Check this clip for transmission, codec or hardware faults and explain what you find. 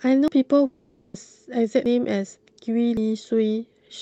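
Two kinds of fault stand out in this speech, carried over an Opus call path whose high end stops near 8 kHz.

At 0.28, 1.86 and 2.97 s, a sudden jump forward, roughly a tenth of a second skipped: a dropped buffer (overrun), likely from samples being overwritten before collection.

From 0.66 to 1.16 s, a fading buzzy continuation fills nearly half a second, then speech resumes further on: a long network dropout, likely lost packets the receiver patched over.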